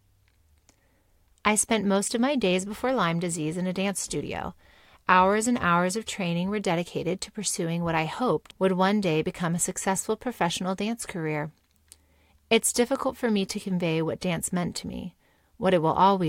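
No technical faults can be heard anywhere in the speech. There is nothing to place on the timeline.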